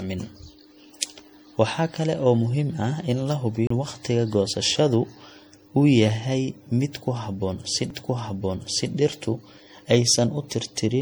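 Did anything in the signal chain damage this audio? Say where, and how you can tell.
Yes. At the codec stage the speech sounds swirly, smeared and hollow throughout, likely from several generations of 64 kbit/s MP3 re-encoding piling up quantisation damage.

At playback there are two CD skips: a roughly 30 ms mute from 3.67 to 3.70 s, between "in la" and "waqtiga goosashada", and a tiny one at 7.90 s, where the laser jumped tracks.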